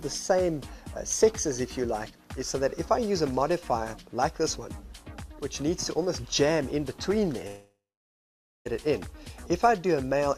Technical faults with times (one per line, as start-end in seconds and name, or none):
7.47-8.67 long network dropout